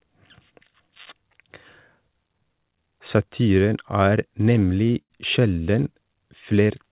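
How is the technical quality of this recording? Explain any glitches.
The main glitch is a short patch of repeated stalls (stutter) late in the clip, on top of call-grade audio with nothing above 4 kHz, which fits G.711 mu-law.

From 4.6 to 5.12 s, the jitter buffer ran dry four times, with gaps up to 82 ms. The receiver stretched the last sound to cover them, so nothing's lost, but it drags and stutters.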